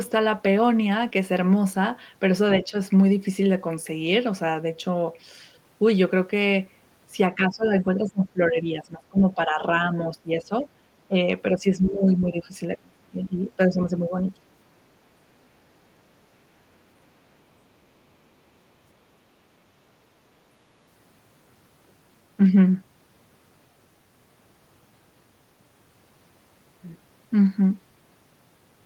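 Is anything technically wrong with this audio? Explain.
Yes. The speech repeatedly dips by about 10 to 25 dB at 2.62–2.74 s, 7.35–9.66 s, 9.93–10.67 s, 11.1 s, 11.52–12.54 s, 12.70–14.25 s and 14.4 s, most likely speech suppressed in double talk, where an echo canceller mistook overlapping far-end sound for echo and turned the speech down.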